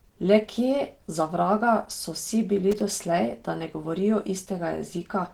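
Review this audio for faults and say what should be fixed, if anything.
Throughout the clip the speech sounds hoarse, muffled and grainy, with a rough, noisy texture where smooth tones should be. The damage is plainly audible even though the spectrum still reaches about 20.1 kHz. This is likely Opus compression at a low rate, around 16 kbps. At that rate the encoder works in its hybrid speech mode and, short of bits, fills bands with noise instead of keeping their detail. To prevent this, encode at a higher Opus bitrate or keep an uncompressed master.

From 2.71 to 2.81 s, for roughly 90 ms, there is a short irregular burst of crackle and scratching. This is loose connector crackle. A worn or dirty contact in the signal path rapidly makes and breaks as it shifts, chopping the audio into fragments. To prevent it, clean or replace the affected cable or connector and make sure it is seated firmly and not under strain.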